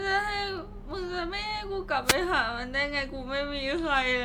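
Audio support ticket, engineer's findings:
Wireless microphone noise hit at 2.04–2.17 s: brief swish of static over the speech, about 0.14 s. Probable component: analogue FM radio link. Reflections cancelled the carrier, raising receiver noise. Hiss fills the gap rather than silence, unlike a digital dropout.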